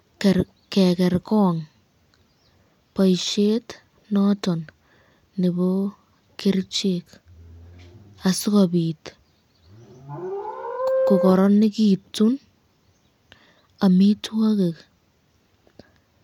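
A speech recording with no technical faults to report. Nothing in it calls for a time, a cause or a fix.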